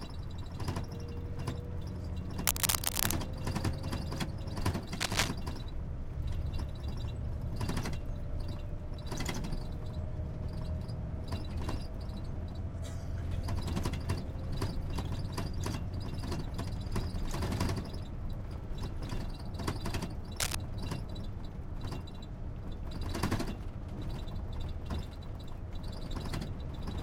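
Cable scratch noise appears at 2.45–3.13 s, 4.95–5.29 s and 20.40–20.55 s, as dense, uneven rustling roughly as loud as the sound itself, and about 5 dB louder than it in the first. It is likely a worn connector being moved. Unlike isolated digital clicks, it scratches continuously for a moment.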